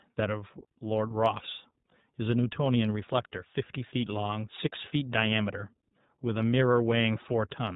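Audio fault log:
throughout, iLBC codec: the speech is squeezed into a narrowband band with nothing above 4 kHz, and each short frame is coded on its own, so it comes out clearly rough and a bit synthetic. That fits iLBC's 15.2 kbps mode with 20 ms frames.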